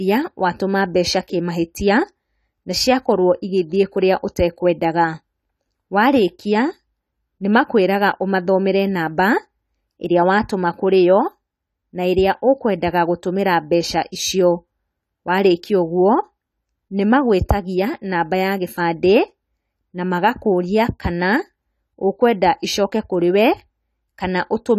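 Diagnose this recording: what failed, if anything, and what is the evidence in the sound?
Codec stage, throughout: the speech is dull and smeared, with nothing above 14 kHz. This is likely AAC compression, at a low bitrate, perhaps 32 kbps.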